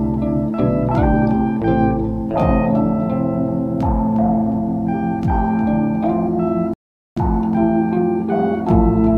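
A rebuffering stall interrupts the music at 6.74 s, lasting until 7.17 s. The player exhausted its downloaded audio and paused until more data arrived, so the music drops to silence for about 0.43 s, then picks up exactly where it stopped, with nothing skipped.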